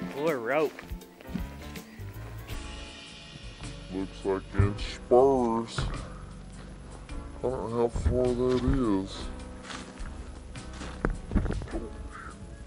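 From 2.53 s to the end, a section at the wrong speed plays at 0.642 times its proper rate, so everything drags and sinks roughly seven semitones lower at once. The likely cause is playback or editing against the wrong clock. Unlike a pure pitch shift, where timing stays intact, here duration and pitch move together. Unlike wow, the slowdown is steady and does not waver for the rest of the audio.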